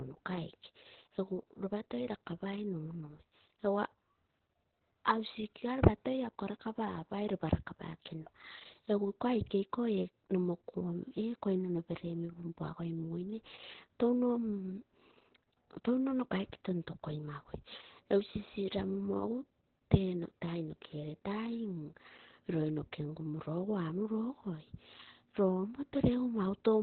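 Throughout the speech, Opus voice compression at a low rate, likely near 8 kbps in SILK narrowband mode, leaves nothing above 4.2 kHz and codes the excitation coarsely. This makes it hoarse and faintly robotic, unlike a clean low-pass filter, which would only muffle.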